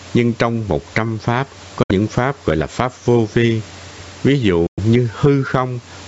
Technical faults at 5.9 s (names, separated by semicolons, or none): gain pumping